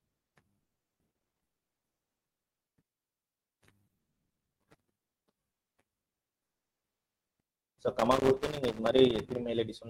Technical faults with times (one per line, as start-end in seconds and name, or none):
1.11-1.70 loose connector crackle
4.38-5.31 loose connector crackle
7.99-9.36 loose connector crackle